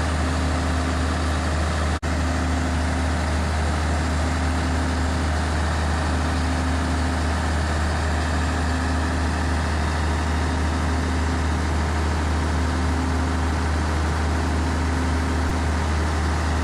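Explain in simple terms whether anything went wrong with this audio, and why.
Near 15.49 s, the playback device ran short of fresh audio for a moment. With nothing new to play, it replayed the last tiny chunk, about 2.9 ms long (which fits a 128-sample buffer), three extra times. This is a repeated buffer. Because each chunk is so short, the repeats don't sound like an obvious stutter. They come out as a brief click or buzz with hard joins, covering about a hundredth of a second of sound.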